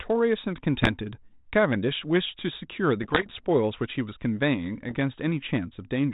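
Bit errors on an ADPCM link hit this speech at 0.82–0.92 s, 3.02–3.44 s and 4.89–4.98 s: flipped bits upset the decoder's step size and predictor, leaving pops and rough, level-jumping bursts over light 32 kbit/s G.726 band-limiting.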